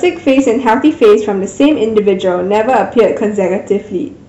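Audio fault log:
Throughout: hard clipping. The loudest moments of the speech carry a gritty crackle and harsh fuzz that rises and falls with the level, while quieter passages stay clean. The signal is driven about 8 dB beyond what the stage can pass, so its peaks are sliced off flat, and around 3 percent of the audio sits against that ceiling. Those squared-off tops generate high harmonics that were never in the original sound.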